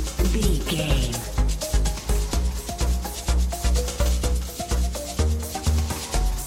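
No technical faults are audible.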